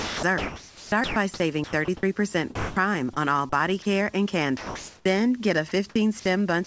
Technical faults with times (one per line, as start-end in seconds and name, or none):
0.00-1.16 sound chopped by the voice detector
1.64-2.03 sound chopped by the voice detector
2.55-2.76 sound dropped by the voice detector
4.57-5.05 sound dropped by the voice detector